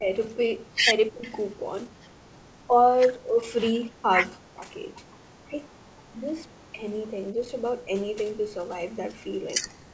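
The speech keeps dipping and breaking up at 0–2.29, 2.66–2.81, 3.14–5.04, 5.44–5.67 and 6.09 s to the end, sometimes dropping by around 40 dB, most likely speech suppressed in double talk, with the echo canceller ducking the talker while the far side spoke.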